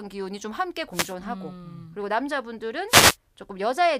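At 0.91 to 1.15 s and again at 2.87 to 3.17 s, a wireless microphone noise hit: the FM radio link fades, receiver hiss surges and crackles over the speech for about a quarter second, unlike a digital dropout, which leaves silence instead of static.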